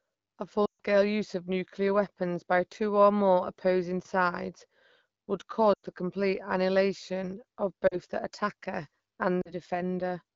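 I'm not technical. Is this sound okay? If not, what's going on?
No. These are lost AMR speech frames: bits of the call dropped on the radio link. The phone stretches the last sound and fades it. Hear this at 0.65–0.80 s, before "use of nuclear weapons", and briefly at 5.74–5.86, 7.87–7.96 and 9.42–9.52 s.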